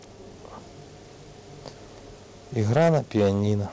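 From 2.7 s to 3.28 s the loudest stretch of speech turns harsh and crackly, the sound of microphone overload. The peaks likely ran about 8 dB past what the converter could take, so their tops were sheared flat on roughly 7 percent of samples. Unlike the steady coding haze of the G.722 call path, whose band stops at 8 kHz, this grit follows the level and appears only on the strongest peaks.

At 2.78 s, just inside that distorted stretch, the whole sound, background included, drops by about 2 dB in a single step. This is the microphone volume stepped down, most likely by the call software reacting to the overload it had just detected. A compressor or a fade would glide and recover. This change is instant and stays put, and it is too small to stop the clipping.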